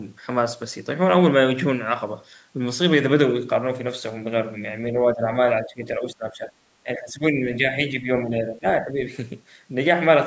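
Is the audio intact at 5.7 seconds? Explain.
No. From 5.64 to 5.81 s the speech dips sharply, dropping by roughly 15 dB for a stretch of about 150 ms before recovering. That dip is speech suppressed in double talk, and its likely cause is the far end talking at the same moment. The echo canceller, unable to tell this talker apart from the returning loudspeaker echo, pulled the level down on everything it heard, briefly pushing the near-end speech under.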